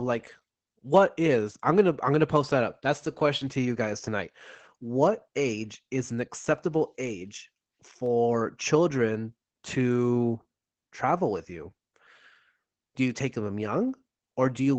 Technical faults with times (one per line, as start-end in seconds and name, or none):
0.00-14.79 Opus voice compression
6.19 dropped samples
8.06 dropped samples